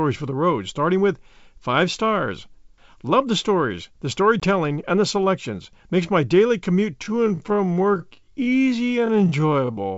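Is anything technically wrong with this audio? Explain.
Yes, two faults stand out.

Between "the stories the" and "and the selections", at 4.40 to 4.44 s, packet loss on the ADPCM call cuts a hard-edged 20 ms hole, about one packet. The decoder's predictor and step size drift from the sender's, so the speech returns slightly distorted. A plain dropout would resume cleanly.

From 6.98 s to the end, after "my daily commute", a time-stretched section slows the speech to 0.574 times its pace while the pitch holds steady. It drags, likely from software repeating short pieces to fill a length. A tape-style slowdown would have lowered the pitch too. The G.722 wideband coding behind both faults leaves at most faint traces.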